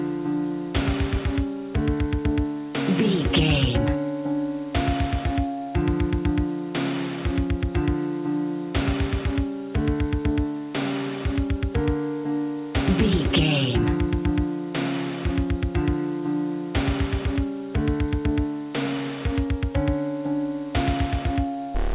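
No technical faults can be heard anywhere in the clip. It does pass through a WebRTC call path, and the audio stops at 4 kHz, which fits a narrowband telephone codec such as G.711 A-law.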